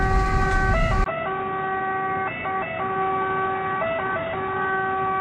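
Input switched to a poorer device at 1.04 s: after a 20 ms gap the audio turns dull and boxy and stays that way to the end, with nothing above 3.8 kHz, a level about 5 dB lower and a new background noise sitting well below the signal. The likely cause is the recording input changing mid-take to a narrower-band source, such as another microphone or a headset's call profile, which brings its own tone, gain and noise floor.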